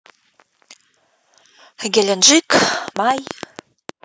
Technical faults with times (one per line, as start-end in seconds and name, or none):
2.68-3.90 train of clicks